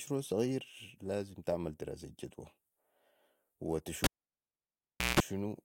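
At 4.04 s a live cable is pulled out and plugged back in, so the signal path is physically broken while the connector is in the air. A pop marks the break, then the speech drops to near silence for about 1.11 s. As the plug goes back, the bare tip touches first and picks up a 60 Hz mains buzz lasting about 175 ms, and a second pop brings the sound back by 5.2 s.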